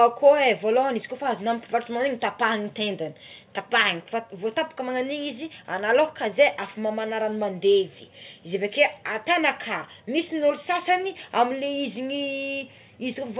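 Nothing goes wrong here: the speech simply comes across as ordinary call audio, with nothing above about 4 kHz, which is what a narrowband phone codec like G.711 mu-law would leave, and no faults show up anywhere.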